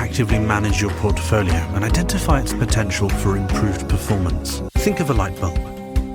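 An adaptive stream at a lower bitrate: the connection slowed, so the player switched to a lower-quality version from 1.45 to 3.45 s, which fits a step down from 64 to 32 kbit/s Opus. Quality abruptly drops, with heavier codec artefacts, yet no gap.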